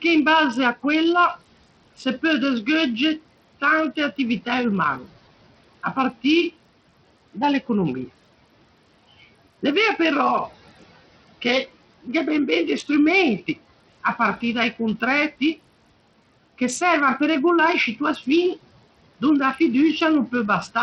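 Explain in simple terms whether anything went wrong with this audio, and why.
Two things went wrong. Throughout, the speech sounds dull and gritty, with nothing above 11.8 kHz. This is likely heavy Bluetooth SBC compression squeezing the treble out to save data. At 4.99 to 5.09 s, the noise suppressor cut speech, mistaking a brief stretch of it for background noise and turning it down so it sounds swallowed. The faint room noise behind the speech is part of the recording itself.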